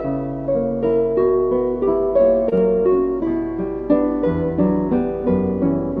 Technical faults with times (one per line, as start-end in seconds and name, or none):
2.49-2.53 short concealed packet loss
2.55-2.60 short stall from a late packet